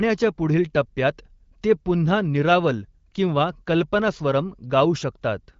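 Nothing stood out on listening to this speech, which comes through the AMR wideband (HD Voice) codec at 15.85 kbit/s with its top end stopping around 7.6 kHz.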